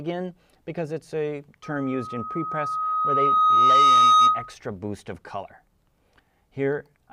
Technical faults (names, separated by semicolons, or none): loudspeaker feedback squeal